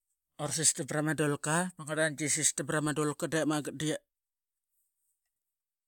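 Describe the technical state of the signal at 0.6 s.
At 0.6 s the signal is intact, with no audible technical fault at that point.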